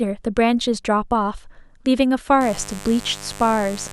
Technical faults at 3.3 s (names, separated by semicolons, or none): mains buzz